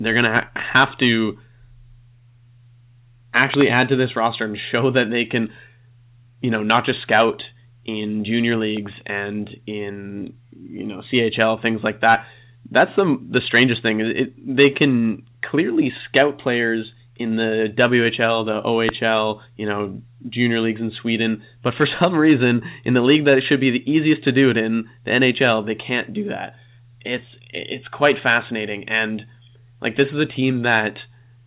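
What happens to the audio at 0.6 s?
Right around there you're hearing a loud pop, actually two quick ones between 0.37 and 0.61 s, roughly 15 dB over the speech, likely a voltage glitch.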